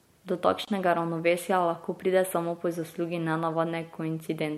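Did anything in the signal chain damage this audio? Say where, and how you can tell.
Yes. The damage happened at the codec stage, where separately encoded pieces were joined. At 0.65 s the continuous speech drops into a silence lasting about 25 ms, ending at 0.68 s, just before "ravnovesja lahko pride samo". The edges are smeared, and the speech resumes exactly where it left off. This is a gap at a join of encoded pieces: the encoder's start-up delay and final-frame padding were left untrimmed when the pieces were concatenated.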